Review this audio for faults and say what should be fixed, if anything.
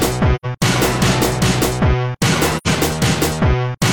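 AAC frame loss with muting occurs from 0.35 to 0.46 s and again from 2.57 to 2.68 s. Each gap is about 85 ms of silence, which fits two consecutive lost frames. The decoder substituted zeroed spectra, and the overlapping transform windows taper the sound down into each hole and back up over roughly one frame length. To prevent it, protect the AAC stream in transit with retransmission or forward error correction so that frames are not dropped.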